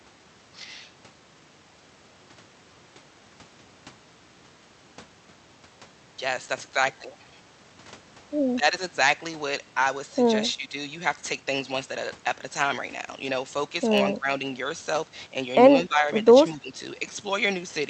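Speech suppressed in double talk at 8.57, 10.54, 14.15, 15.86 and 16.55 s: each time the speech dips by roughly 10 to 15 dB for a fifth of a second or less. The likely cause is an echo canceller unable to separate the talker from overlapping far-end echo and turning the talker down too.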